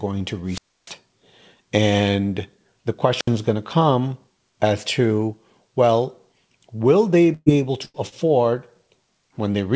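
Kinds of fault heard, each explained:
Wireless microphone squelch dropout: The analogue FM microphone's radio signal faded until the receiver's squelch muted the output. Hiss rises, then a hole of near silence follows, about 0.29 s long from 0.46 s and about 70 ms near 3.15 s, before the speech returns.
Burst of packet loss: A run of packets was lost or arrived too late, so the receiver stretched the last sound while fading it down. About 120 ms goes missing at 7.34 s, ending in 30 ms of silence, and about 90 ms at 7.85 s.
Short concealed packet loss: About 30 ms of audio failed to reach the decoder in time at 8.09 s. The receiver patched the hole by continuing the preceding sound and blending back into the real signal, leaving a brief smear in the speech.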